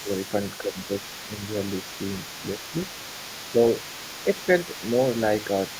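An echo canceller likely failing to clear the far end's loudspeaker sound lets the other side's voice leak through for the whole clip, a faint second voice roughly 15 dB below the talker. Speech suppressed in double talk, likely from the canceller muting both voices at once, makes the talker dip by around 10 dB at 0.02 to 0.10 s and 0.62 to 0.89 s, and more gently at 4.25 to 4.48 s.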